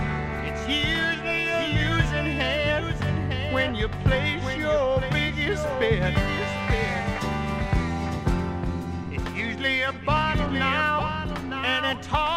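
From start to finish, every sound returns about a second later as a full-band copy, only a few decibels quieter, with no decay or room colour. This doubled audio track likely comes from a second, slower capture path mixing the same signal back in.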